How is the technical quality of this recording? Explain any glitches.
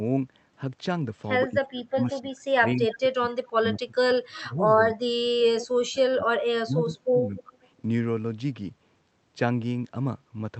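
The recording has two recurring call-processing glitches between about 1.5 and 7.5 s. The voice repeatedly drops out, and faint echoes of the other voice briefly return. The audio tops out around 8 kHz, consistent with a call codec path.

Speech suppressed in double talk occurs from 1.53 to 5.36 s (roughly two seconds of it affected), 5.69 to 6.28 s, and 6.6 to 7.54 s. The voice sinks by up to about 30 dB or breaks into pieces. The likely cause is an echo canceller mistaking simultaneous talk for loudspeaker echo and turning everything down.

An echo leak is heard at 2.90–2.96 s, 4.33–4.39 s and 5.59–5.67 s. Each is a short, quiet scrap trailing the voice by 243 ms, at about 15 to 20 dB below the speech. This is likely a speakerphone whose echo canceller let part of its microphone pickup slip back into the call.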